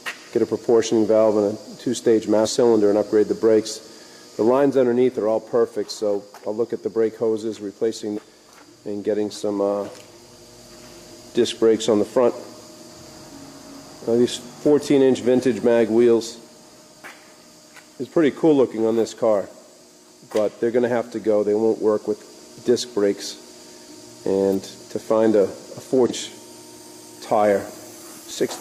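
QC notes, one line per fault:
2.42, 8.13 and 26.06 s: compressed frames skipped. The audio jumps ahead roughly 0.2, 0.5 and 0.3 s, whole 46.4 ms frames dropped.
9.42 s and 28.29–28.31 s: chunks out of order. 5.8 ms chunks play one and three chunks late, leaving a brief jumbled moment with hard joins.
24.53 s: electrical switching spike. A sharp snap sits on top of the sound, likely an arc from a nearby switch or motor picked up by the line.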